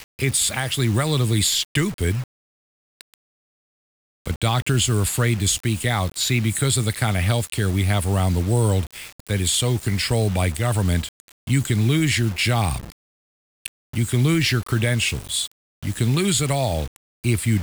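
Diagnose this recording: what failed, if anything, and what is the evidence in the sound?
The speech carries grainy distortion from start to finish that tracks the level: quiet tails turn gritty and sputter toward silence. The likely cause is low bit depth without dither at sample-format conversion, rounding to about 5 bits, leaving error roughly 20 dB below signal.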